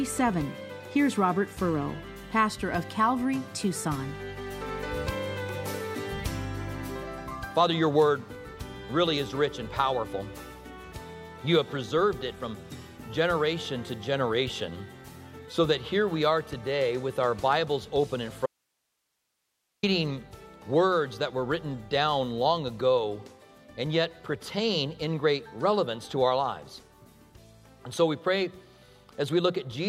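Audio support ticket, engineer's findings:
Abrupt cut from 18.46 to 19.83 s (about 1.4 s); gap holds only faint hiss, about 50 dB below signal level, then sound returns mid-flow. Audio dropout to a faint residue. Likely upstream source or link lost while downstream gain stayed live.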